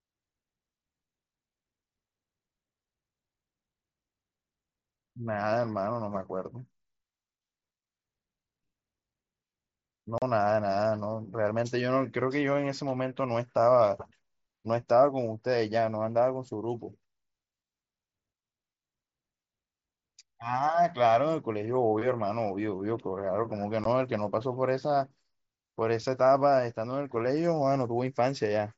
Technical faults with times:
10.18-10.22 unconcealed Bluetooth headset packet loss
23.84 unconcealed Bluetooth headset packet loss

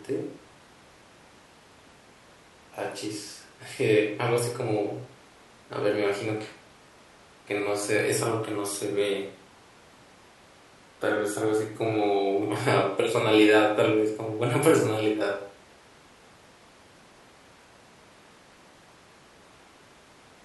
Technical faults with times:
none

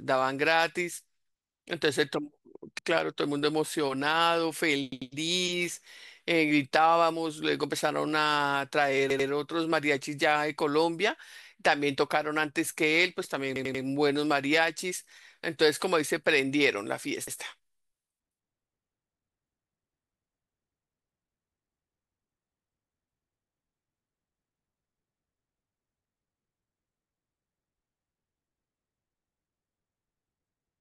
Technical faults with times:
2.79-2.88 repeated buffer
4.92-5.11 repeated buffer
9.10-9.29 repeated buffer
13.56-13.84 repeated buffer
17.28-17.37 repeated buffer

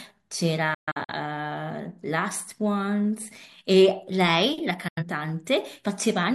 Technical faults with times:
0.74-1.13 digital broadcast dropout
4.88-5.03 digital broadcast dropout

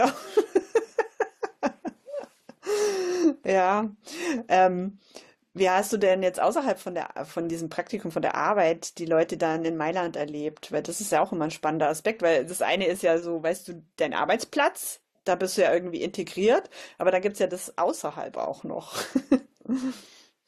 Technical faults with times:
none

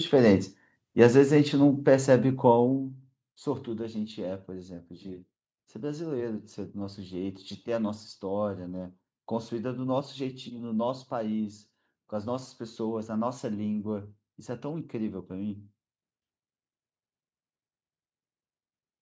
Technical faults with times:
none

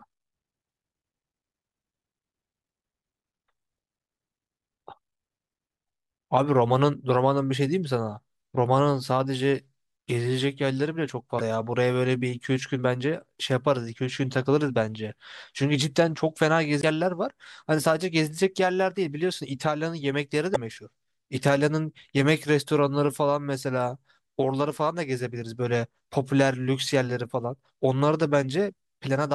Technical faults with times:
11.37-11.41 damaged data in a compressed stream
16.79-16.84 damaged data in a compressed stream
20.52-20.56 damaged data in a compressed stream

